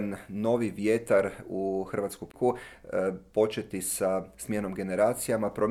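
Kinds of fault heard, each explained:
CD skip: the laser lost its place on the disc's spiral and landed on a different turn, so the player briefly fell silent and then carried on from another point in the audio. Here it comes at about 2.32 to 2.34 s, with a mute of roughly 20 ms before the sound resumes out of sequence. Unlike an ordinary dropout, the sound does not pick up where it stopped.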